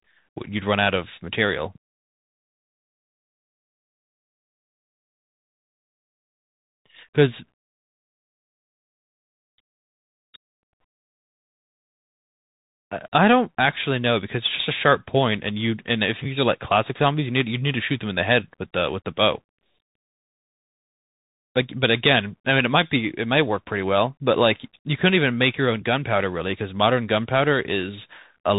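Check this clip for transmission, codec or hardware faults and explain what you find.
Bluetooth CVSD headset codec damage runs throughout. Each sample becomes a single up-or-down step of adaptive size, so fast peaks outrun it: s sounds turn scratchy over granular hiss, and nothing passes above 3.8 kHz. A spectrogram shows a hard ceiling there, with speckled noise beneath.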